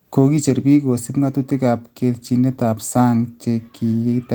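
Speech recording, with no technical faults found anywhere in the clip.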